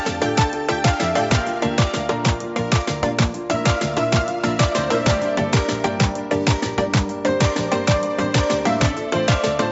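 No technical fault can be heard: the audio has passed through a call's microphone processing and a WebRTC call path, which together limit it to nothing above 8 kHz, as expected for that route.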